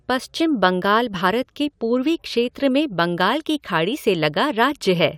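No technical faults can be heard anywhere in the speech signal, which stays intact and continuous throughout.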